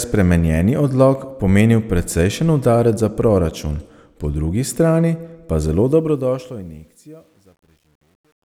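Speech fading out from 5.79 s to 8.45 s suffers truncation distortion on a fade: an undithered gain stage, consistent with 10-bit resolution, leaves steps in the waveform from 5.79 s. The tail turns gritty, worst from 6.67 s to the end.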